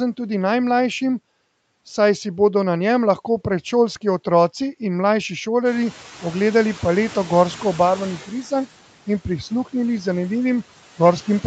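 Throughout the clip, noise suppressor artifacts appear as the suppressor cuts bands it takes for steady noise by about 11 dB, so the noise sinks between the words and rises under them. From 5.65 s to 8.26 s, when the room noise jumps by roughly 19 dB around 5.5 s, the noise suppressor is catching up: its estimate takes about 2.6 s to adapt, so the louder noise first comes through with only about 7 dB of reduction before it sinks.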